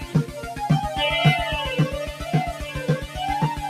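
A noise suppressor built for speech stays active across the whole clip, even though this is not speech. It treats steady parts of the sound as noise and pulls them down. The level swings by around 10 dB as the suppressor clamps and releases. Held tones and tails sink while onsets pass through. The result is a pumping, fluttering or thinned texture throughout.

Three spots show sound cut by the noise suppressor. From 0.00 to 0.39 s, the sound drops by about 8 dB for roughly a third of a second. From 2.09 to 2.25 s, it dips by about 9 dB for a brief stretch. From 2.52 to 2.83 s, it falls again by about 8 dB for roughly a third of a second. In each case the sustained or decaying part sinks in level or its decay is cut short.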